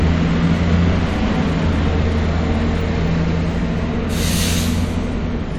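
Nothing stood out as a technical fault on listening to these sounds.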